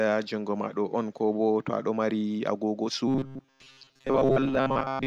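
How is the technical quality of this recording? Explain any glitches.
The recording has one clear fault: robotic sound from repeated short buffers, running from 3.08 s to the end at 5.07 s. The speech collapses into a rigid, metallic buzz at 134 Hz that still loosely tracks the words. The likely cause is audio arriving too slowly, with the software filling the gaps by looping a slice of about 7.5 ms, which sets that fixed pitch. Roughly two-thirds or more of the sound in this stretch is repetition rather than new speech. On a spectrogram this shows as evenly spaced horizontal harmonic lines at multiples of 134 Hz. The waveform shows near-identical short cycles repeating.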